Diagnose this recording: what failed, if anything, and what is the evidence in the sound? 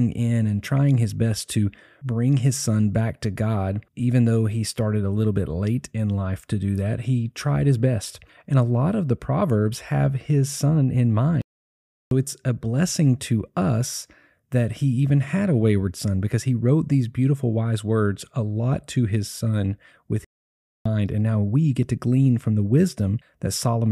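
Two playback stalls in the speech: silence from 11.42 to 12.11 s after "have his son in", picking up at "it's a blessing to", and again from 20.25 to 20.86 s after "to his son with". Both gaps run about 0.6 to 0.7 s, likely the player starving for data or its thread getting blocked.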